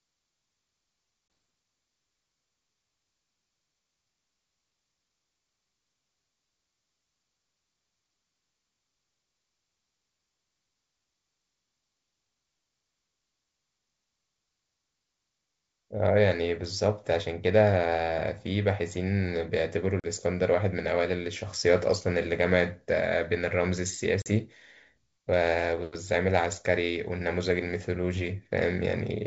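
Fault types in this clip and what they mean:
Packet loss on an ADPCM call: the G.722 speech drops into hard-edged silent holes where packets never arrived. There's a short 20 ms gap at 1.28 s, about one packet, and two 40 ms gaps, about two packets each, at 20.00 to 20.06 s and 24.22 to 24.29 s. Because the decoder's adaptive predictor and step size lose track of the sender's during each hole, the speech comes back slightly distorted.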